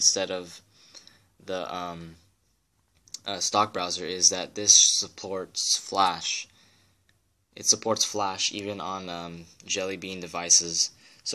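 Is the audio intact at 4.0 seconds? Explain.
Yes, the audio is intact at 4.0 seconds, with no dropout, click, distortion or other fault audible at that point.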